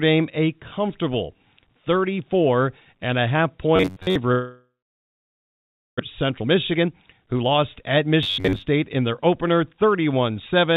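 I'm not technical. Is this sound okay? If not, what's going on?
No, it isn't. Several faults are audible.

Robotic sound from repeated short buffers, 3.76 to 4.16 s just after "and a half", and again 8.23 to 8.65 s: the speech turns into a rigid metallic drone locked near 94 Hz. The likely cause is new audio arriving too slowly, so each roughly 11 ms scrap was replayed over and over.

Long network dropout, 4.32 to 6.01 s: the sound trails off into a fading buzz or hiss, then goes silent for over a second. The likely cause is that nothing reached the listener for a long stretch, and about a second of what was said never comes back. That's an actual gap, not distortion.

Jitter buffer speed-up, 6.23 to 9.84 s: the speech runs about 18% faster and sounds rushed, but the pitch doesn't rise. The system was catching up after the delay by trimming out tiny slices, roughly 0.7 s in total. A played-fast recording would also sound higher.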